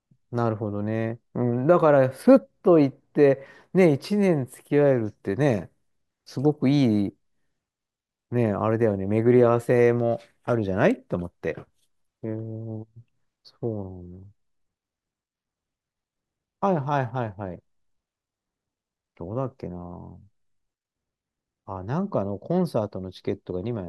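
Speech recording, no technical faults found on listening.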